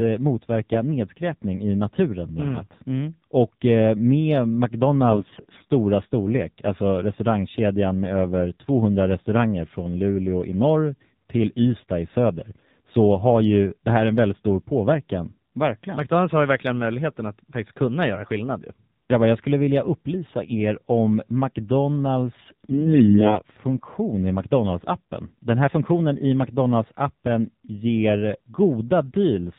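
The whole clip runs through the AMR narrowband mobile codec. Nothing above 4 kHz survives. The speech is modelled from a few pulses per short subframe. At this low rate, which fits about 7.4 kbps, the voice sounds plainly buzzy and synthetic.

AMR bit errors appear from 5.10 to 5.70 s. Weakly protected bits in the frames arrived flipped, roughly one in ten. The driving pulses land in wrong places. The voice keeps its pitch and level but turns hoarse, scratchy and gargly.

The same fault returns from 22.44 to 23.42 s. This burst is longer but milder, with roughly one bit in twenty flipped. The gargling roughness is lighter here. Pitch and loudness still hold roughly steady throughout the damaged stretch.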